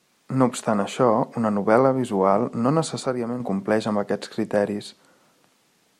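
Speech recording with one channel dropping out from 3.06 to 3.40 s: the level falls abruptly by about 6 dB and recovers at the end. That is what a mono sum does when one stereo channel goes silent, and a lost channel is the likely cause.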